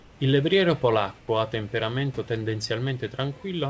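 The sender likely stopped transmitting during pauses and let the receiver synthesise comfort noise in place of the background. From 0.00 to 0.20 s, the real room background gives way to a flat, featureless hiss about 3 dB quieter. From 1.19 to 1.28 s, just before "ha temperamento", a 90 ms gap is filled the same way, this time about 8 dB down, so the background audibly dips and smooths out before the speech returns, all within a band that stops at 8 kHz.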